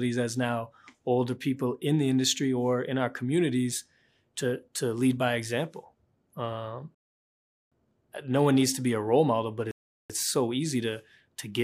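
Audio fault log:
6.95–7.72 s and 9.71–10.10 s, rebuffering stall. The sound drops to silence, then resumes exactly where it stopped. The player ran out of downloaded audio. Nothing is lost, but about 0.77 s and 0.38 s are added.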